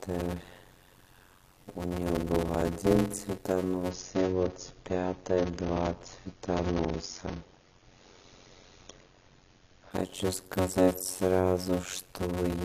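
From the start, a block size mismatch (padded) runs under the whole clip. Each block of audio is shorter than the slot the next stage reads, and the remainder is filled with zeros. That puts a steady buzz at about 91.9 Hz and slows everything to 0.533 times normal speed while the timbre stays. The ratio fits 256-sample blocks landing in 480-sample slots. A waveform shows regular flat gaps repeating at the block rate. A spectrogram shows thin vertical stripes and harmonics of the buzz.

From 3.91 s to 9.91 s, an adaptive stream at a lower bitrate takes over. The connection slowed, so the player switched to a cheaper encoding. The treble disappears abruptly and artefacts thicken, giving a dull texture. This fits a drop from around 96 kbit/s to 24 kbit/s AAC. On a spectrogram the energy above 7.2 kHz cuts off sharply at both boundaries, a flat-topped band with no gap in the waveform.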